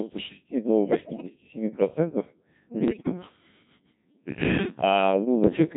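From the first moment the whole clip runs through the Codec 2 vocoder, and the damage is heavy. The buzzy, robotic texture suggests its 1.6 kbit/s mode. At that rate only pitch, voicing, level and a rough spectral envelope survive each frame, and the decoder rebuilds the speech from sine waves. The original waveform is simply gone, so the voice comes out synthetic and metallic throughout.

Then, from about 0.85 to 1.29 s, bit errors on digital voice radio kick in. Roughly 7 percent of bits are flipping. In a vocoder this lean, each corrupted bit pushes a whole frame's pitch, level or tone colour somewhere wrong, so this stretch warbles and lurches. A second burst hits from 2.88 to 3.12 s, and it's harsher, with something like 15 percent of bits wrong. That one collapses into bleepy, robotic gibberish with sudden jumps in pitch and loudness.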